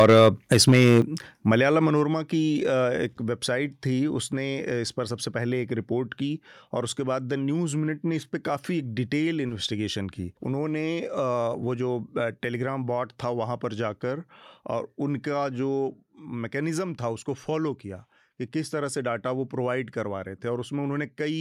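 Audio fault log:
0.00–1.01 s, microphone overload: speech peaks are driven about 6 dB past full scale, so several percent of samples are flattened against the ceiling, giving loud syllables a harsh, crackling edge. The likely cause is an input volume set too high. The waveform shows squared-off, flat-topped peaks, and the spectrogram shows broadband smearing on them.
0.02 s, 1.02 s and 2.04 s, microphone volume stepped down: the level drops abruptly by about 2, 7 and 4 dB respectively, pulling both speech and background down together. The likely cause is the call software reacting to the overload by cutting the device's input gain. The waveform envelope shrinks in clean steps, and the whole spectrogram dims at once.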